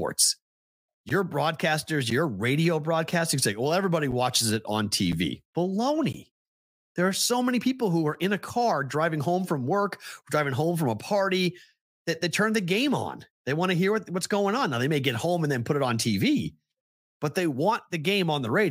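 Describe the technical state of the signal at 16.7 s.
At 16.7 s the speech signal is intact, with no technical fault present at that moment.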